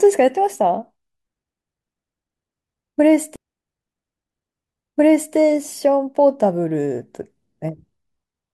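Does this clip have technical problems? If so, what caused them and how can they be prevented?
Yes: a stream segment repeated from 3.35 to 5.34 s, replaying about 2.0 s of speech after a small blip, unlike a stutter's short loops. Prevent by deduplicating segments before queueing.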